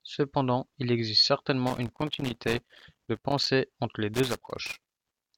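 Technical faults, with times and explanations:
1.67–3.47 s and 4.14–5.38 s, loose connector crackle: two irregular bursts of crackle and scratching sit over the speech, the first lasting about 1.8 s and the second running to the end of the clip. A worn or dirty contact in the signal path is repeatedly making and losing connection as it shifts. Each break chops the signal, which produces the uneven, gritty texture.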